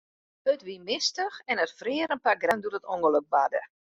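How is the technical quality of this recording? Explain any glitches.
A brief glitch at 2.51 s in the speech comes from damaged data in a compressed stream: corrupted bytes made the decoder misread that frame and resynchronise on the next one.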